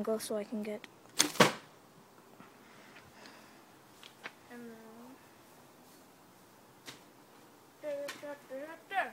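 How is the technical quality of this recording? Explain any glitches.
No glitches or technical faults can be heard anywhere here.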